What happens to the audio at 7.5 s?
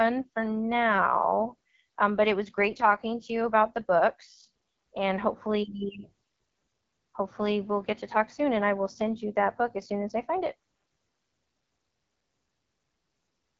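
At 7.5 s the speech carries the AMR wideband (HD Voice) codec damage present throughout the clip. The codec models the voice with a pulse-driven vocal tract filter up to 6.4 kHz, adding shaped noise above, with nothing past 7.3 kHz. The plainly audible roughness and rasp fit its low 8.85 kbit/s mode.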